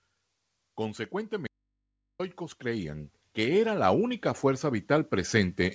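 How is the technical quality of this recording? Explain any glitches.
Two faults are audible in this speech recording, over a call path whose content stops at 8 kHz, consistent with a G.722 wideband codec.

Automatic gain rising, from 1.1 s to the end: the gain control judged the input too quiet and steadily raised its gain, so speech and background swell together.

Audio dropout to a faint residue, 1.47 to 2.19 s: the speech cuts out abruptly for about 0.72 s, leaving only mains hum about 55 dB below the signal, likely because the signal was lost while the path stayed live.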